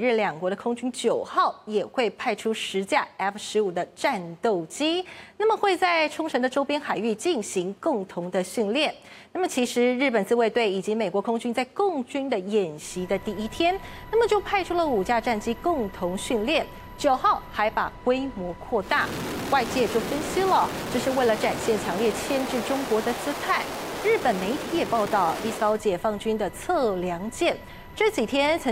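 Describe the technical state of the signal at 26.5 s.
At 26.5 s the signal is intact, with no audible fault at that point.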